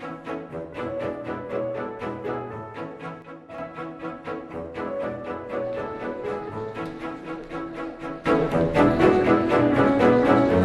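At 3.22 s the level drops abruptly by about 6 dB, then returns at 3.58 s. At 8.26 s it jumps up by about 12 dB and stays there to the end. Both are sudden gain jumps. The sound and its background noise shift together, with no fade. The likely cause is a digital gain change applied from one sample to the next, without a ramp.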